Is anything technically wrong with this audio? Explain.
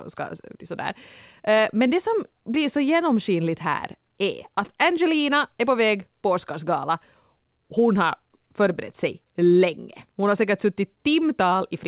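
No, nothing is technically wrong with this speech.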